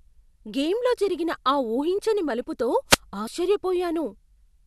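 A speech recording with two separate faults. From 2.88 to 2.98 s there is a wireless microphone noise hit: the analogue FM radio link fades as reflections cancel, so receiver noise swells into a brief swish of static over the voice, visible on a spectrogram as a broadband haze across the whole frequency range. At 3.27 s compressed frames are skipped, dropping roughly 70 ms of audio, which fits about three frames of 26.1 ms each. The audio jumps ahead at that point, which shows on the waveform as an abrupt splice.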